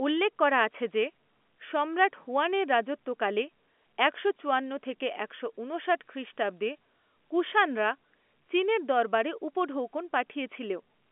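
No technical faults are present in the speech, which carries the narrow band of G.711 A-law telephone coding at 64 kbps, spanning roughly 250 Hz to 3.4 kHz with nothing above about 3.7 kHz.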